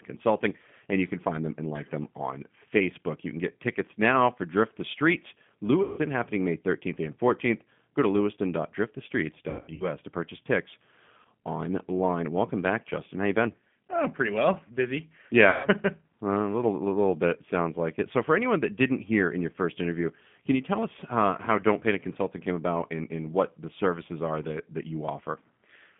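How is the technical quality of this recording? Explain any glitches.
The technical quality is limited. The whole recording carries audible low-bitrate speech coding, and four short dropouts have been patched over by the decoder.

Throughout, the sound has the G.729 codec character. The speech is confined to roughly 150 Hz to 3.5 kHz and rebuilt from a filter, a pitch predictor and a few pulses per frame, which fits an 8 kbit/s G.729-type coder. The result is a rough, slightly synthetic texture. That texture, rather than simple muffling, separates it from plain band-limiting.

VoIP packet loss concealed by the speech codec occurs at 5.83 to 6.00 s, 9.50 to 9.92 s, 11.22 to 11.26 s and 15.49 to 15.69 s. When audio goes missing, the decoder stretches its last pitch and filter into a fading buzzy tone or coloured noise. The sound then stays weak briefly after it returns. The gaps point to roughly 150, 210 (scattered across about 300 ms), 30 and 150 ms of lost packets. 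Silent gaps or clicks would mark a different fault, but here the holes are smeared over.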